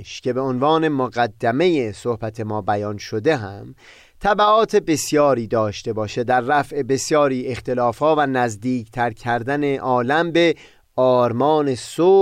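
A speech recording with no technical fault anywhere in it. There is nothing to time or trace to a cause.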